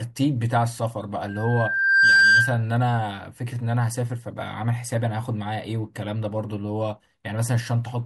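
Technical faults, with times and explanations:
1.28 to 2.62 s, loudspeaker feedback squeal: A steady tone at 1.6 kHz appears in the speech and swells over most of a second. It peaks around 10 dB louder than the speech. A microphone was picking up the loudspeaker it fed. At 1.6 kHz the loop returned more level than it received, so that one frequency kept growing. The tone stops at 2.62 s.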